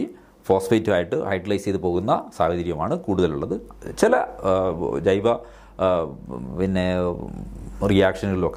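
From 1.32 to 1.95 s and again from 6.20 to 7.29 s, the sound runs 5.55% fast and rises 93.5 cents, close to a semitone, then snaps back. This is likely a drift correction step, a clock-matching rate jump, unlike wow's gradual wobble.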